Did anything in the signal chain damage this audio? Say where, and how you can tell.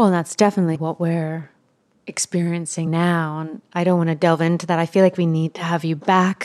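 Yes, the damage is at the codec or storage stage: compressed frames were skipped. At 0.75 to 0.77 s the speech jumps forward by roughly 70 ms, and at 2.86 s by roughly 50 ms. Jumps of that size fit losing about three and then two frames of around 23.2 ms each, frames that were missing or rejected as corrupt by the decoder.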